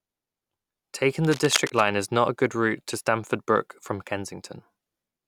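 A speech recording, with a patch of cable scratch noise from 1.21 to 1.88 s, right before "is not a good". It's a rough, uneven rustle sitting around 10 dB under the voice, likely a worn cable or connector being shifted so its contact resistance jumped about.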